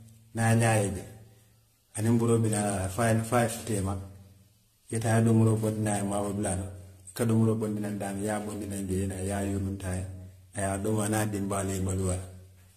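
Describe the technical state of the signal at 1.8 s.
At 1.8 s the speech carries the swirling, hollow smearing of generation loss that runs through the whole clip. It is likely from about ten rounds of AAC-style re-encoding near 64 kbit/s, each on a shifted frame grid. Unlike a single low-bitrate pass, the noise and spectral holes pile up, attacks blur, and nothing survives above 14.3 kHz.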